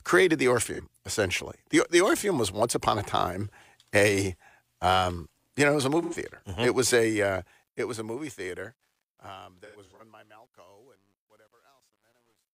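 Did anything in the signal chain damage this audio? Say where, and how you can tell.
Yes. Codec stage: AAC frame loss with concealment leaves smeared, phasey patches at 0.73–0.80 s, 6.02–6.14 s, and scattered through 9.65–10.01 s, where the decoder patched over missing frames.

Also a gain stage without dither: truncation distortion on the fade. From 7.07 s the fade-out turns gritty, worst from 8.91 s to the end, consistent with roughly 10-bit steps.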